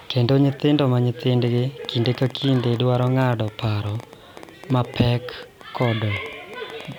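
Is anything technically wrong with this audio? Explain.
Yes. A train of clicks runs from 1.48 s to 6.93 s: about nine per second at an uneven pace, roughly fifty in all, peaking about level with the speech. Likely cause is interference or a faulty connection injecting repeated pulses, heard as ticking over the speech and in pauses.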